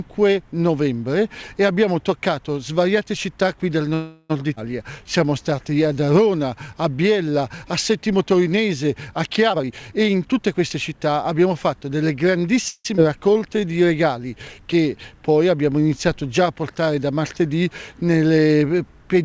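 Audio carried over a call path, band-limited to nothing above 8 kHz, which fits G.722 at 64 kbps. It shows timing faults from the jitter buffer. A call audio freeze at 3.94–4.32 s and another at 12.68–12.87 s stretch the last sound into a fading buzz for about 0.36 s and 0.17 s, the second ending in 40 ms of silence. Nothing is lost, and the likely cause is held-up packets emptying the buffer. Skip ahead events at 4.56–4.58 s and 12.97–12.99 s jump forward almost seamlessly, dropping about 150 ms and about 70 ms of audio. Jitter buffer slow-down follows each recovery. From 4.83 to 6.07 s playback runs at 89% speed, adding 137 ms through repeated pitch periods or bits of pauses, and from 13.08 to 13.69 s it runs at 87%, adding 88 ms. Both stretches sound drawn out at unchanged pitch. Jitter buffer speed-up from 9.49 to 11.73 s runs the audio at 116%, trimming roughly 0.4 s of short pitch-period pieces so it sounds hurried without a pitch shift.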